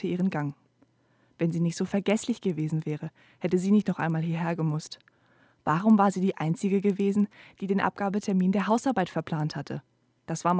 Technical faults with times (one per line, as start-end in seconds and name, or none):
0.00-10.60 resampler restarted on every block